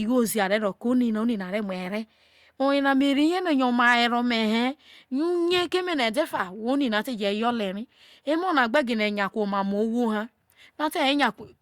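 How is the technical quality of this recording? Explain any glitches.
No technical glitches can be heard anywhere in this speech recording. There is nothing to point to or explain as a fault.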